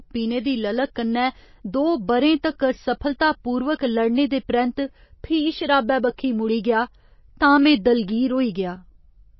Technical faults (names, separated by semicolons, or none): MP3 compression